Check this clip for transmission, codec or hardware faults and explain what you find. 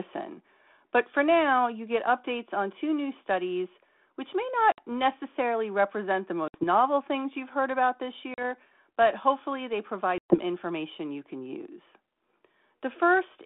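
There's one problem here: packet loss on an ADPCM call, four times, at 4.72 s (about 60 ms gone), 6.48 s (60 ms), 8.34 s (40 ms) and 10.18 s (120 ms, which points to several packets in a row). Each gap cuts to silence with hard edges. The decoder's adaptive predictor and step size drift away from the sender's during the gap, so the speech comes back slightly distorted, then settles after a few tens of milliseconds. The G.726 coding underneath runs at 32 kbit/s with a 200 Hz to 3.5 kHz line band and only light coding grit.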